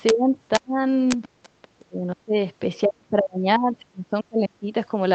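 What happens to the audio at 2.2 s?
Speech suppressed in double talk, 1.77 to 2.35 s: likely an echo canceller ducking the talker during overlap. Speech sinks about 30 dB, the waveform pinches and spectrogram energy fades.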